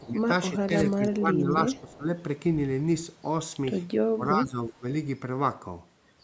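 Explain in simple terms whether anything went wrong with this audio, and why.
Yes, a couple of things went wrong, and both look like the work of an echo canceller on a call.

The main one is likely speech suppressed in double talk. At 0.0 to 0.21 s, 0.5 to 0.73 s, 0.95 to 2.08 s and 4.13 to 4.85 s the speech dips noticeably, deepest around 4.1 to 4.9 s. That's what happens when both people talk at once and the canceller can't tell the real voice from loudspeaker echo, so it turns everything down.

There's also a brief echo leak at about 1.92 to 1.97 s: a faint delayed copy of the voice, arriving roughly a third of a second late. Some of the loudspeaker sound got past the canceller and was sent back. It's quiet and very short, so you'd barely catch it.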